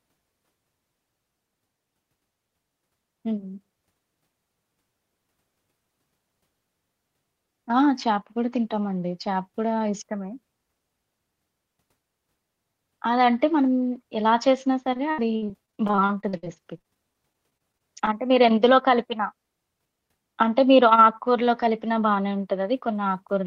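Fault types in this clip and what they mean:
Repeated packet loss (robotic sound): packets kept going missing or arriving too late between 14.93 and 18.09 s, and each hole was patched by stretching the sound that came just before it. With 29 gaps in little over three seconds, some up to 67 ms long and about a fifth of that stretch concealed, the speech turns choppy and takes on a robotic edge, with pieces of it simply gone.
Jitter buffer speed-up: after the loss burst, the receiver was holding more audio than it wanted and trimmed short pitch-period-sized pieces out, repeatedly, to catch up. The speech runs faster without any change in pitch, by about 6% from 18.23 to 18.77 s and by about 17% from 19.79 to 20.09 s. Roughly a few tens of milliseconds are removed each time, so those moments sound hurried.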